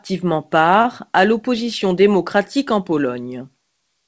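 From 0.82 to 0.86 s, just before "à l'opposition démocratique en", there is a short stall from a late packet. A packet arrived late, the jitter buffer ran dry, and the receiver stretched the last sound for about 26 ms until the packet arrived. The speech then picks up exactly where it left off and runs 26 ms later than before. Nothing is skipped, which sets it apart from a lost-packet gap: you hear a sound held slightly too long with a slight buzz or dip, not a missing syllable, over a G.722 band that stops at 8 kHz.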